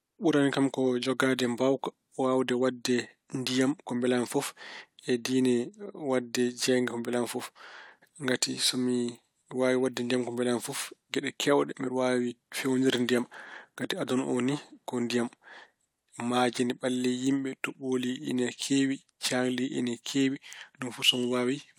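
No technical faults are audible anywhere in this recording.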